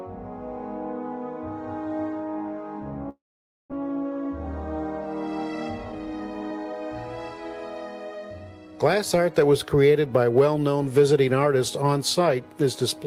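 From 3.09 to 3.74 s, a long network dropout likely cut off the incoming packets. The receiver stretched the last sound into a fading buzz for about 0.6 s, with roughly half a second of near-silence inside that. About 400 ms of audio never returns, and the stream resumes shifted by around a fifth of a second.

The buffer then held more than it needed, so the receiver trimmed short pitch-period slices to catch up. This jitter buffer speed-up runs at 110% speed from 3.81 to 4.25 s, shedding around 50 ms. It recurs at 113% from 5.78 to 6.73 s, dropping around 150 ms. Both stretches sound hurried while the pitch stays the same, over a call-codec path whose coding noise and 12 kHz top end fit Opus at 32 kbps.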